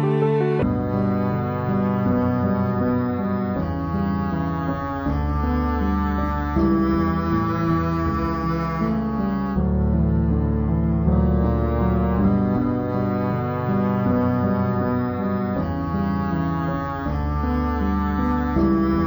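From 0.63 s to the end, everything plays at half speed and a full octave low, with a faint mirrored copy in the upper spectrum. This is stereo read as mono: alternating left and right samples were treated as one sequential channel, doubling duration and halving pitch.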